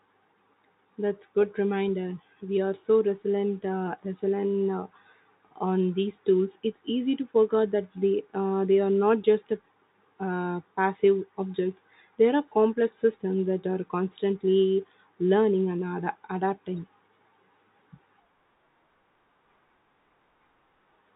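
No technical faults are audible.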